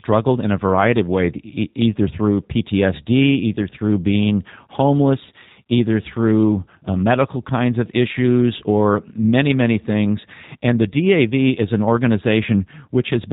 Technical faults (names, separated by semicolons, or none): G.729 codec